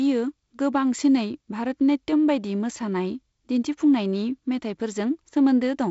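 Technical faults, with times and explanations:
No technical faults are present in this speech, so there are no times or explanations to give.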